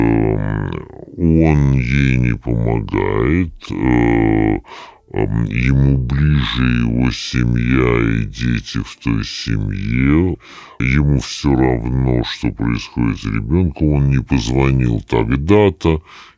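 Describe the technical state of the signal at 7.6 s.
At 7.6 s, as throughout the clip, there is a wrong sample rate: the samples are played back slower than they were captured, with no conversion, which fits 24 kHz material played at 16 kHz. Speech runs at about two-thirds speed and drops about 7 semitones, sounding low and dragged.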